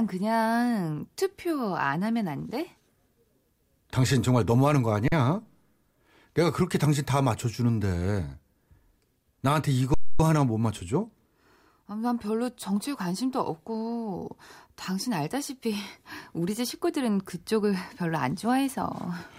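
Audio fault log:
5.08–5.12 s and 9.94–10.20 s, underrun with held sample: the output buffer ran dry twice and the converter kept holding its last value until new data arrived, for 41 ms and then 256 ms. The waveform flattens at a fixed level, so the speech simply stops without a sharp click. Playback then resumes where it left off with essentially no speech missing, so each restart is soft rather than an abrupt jump.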